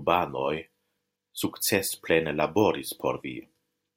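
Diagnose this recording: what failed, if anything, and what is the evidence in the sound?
Nothing failed; no stage shows any audible fault.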